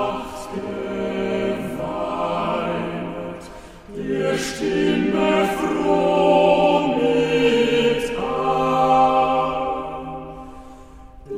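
Nothing in the audio stood out as a technical problem on listening.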